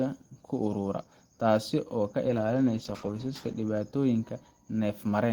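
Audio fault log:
2.29–3.65 s, call bitrate drop: encoding falls from 32 to 13 kbps for about 1.3 s. Coarser coding makes speech rough and watery, with highs trimmed.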